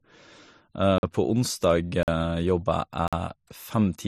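Gap between chunks at 0.98–1.03 s, 2.03–2.08 s and 3.08–3.13 s cuts this speech with holes about 48 ms long. They recur every 1.0 s, so the audio was split into one-second chunks and silence was inserted at each join rather than sound being lost. Transcoding between lossy codecs runs throughout. Nothing remains above 13.9 kHz, and two different kinds of coding smear are heard layered together. The likely cause is an MP3 encode near 43 kbit/s re-encoded to AAC-LC near 64 kbit/s, with the later codec spending its bits reproducing the earlier artefacts.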